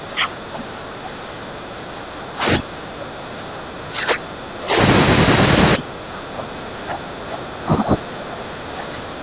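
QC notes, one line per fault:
0.00–4.77 s and 5.77–9.23 s, speech suppressed in double talk: the talker keeps sinking and breaking up, dropping by about 20 dB at worst. This is likely an echo canceller that heard both sides at once, couldn't tell voice from loudspeaker echo, and pulled everything down. The narrow band topping out at 4 kHz fits a G.711 A-law call path at 64 kbps.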